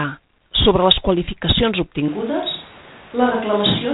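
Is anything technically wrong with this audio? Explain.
Yes. The whole clip runs through G.726 ADPCM at 24 kbit/s: too few bits per sample for the predicted difference leaves a rasping hiss riding the speech, nothing above 3.8 kHz.

From 2.08 s, right after "sobre les qualificacions", there's a switch to a distant microphone, likely because the close mic dropped out: suddenly hollow and roomy, about 5 dB quieter, thinner bass, room noise around 25 dB down, lasting to the end.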